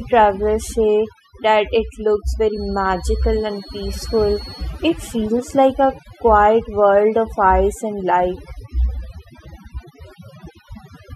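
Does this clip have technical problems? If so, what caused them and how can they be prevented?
Yes. Overdone noise removal runs through the whole clip. A noise reduction stage was pushed too hard, so whenever a frequency band drops close to its estimate of the background noise, that band is pulled far down or shut off entirely. Quieter parts of the speech fall below that line and vanish along with the noise, leaving near-silent gaps dotted with twinkling specks. To prevent it, use gentler reduction settings, or record in a quieter space so less cleanup is needed.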